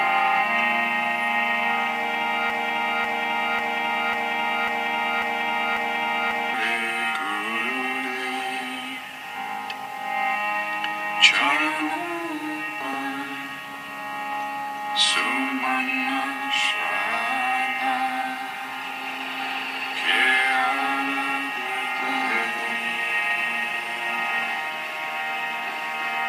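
From 2.5 to 6.54 s the audio falls into a broken-record loop: the same 0.54 s fragment plays seven times back to back, replacing whatever should have sounded there. A waveform or spectrogram shows identical blocks tiling at regular intervals, likely from a stalled player or stream resending its last buffer.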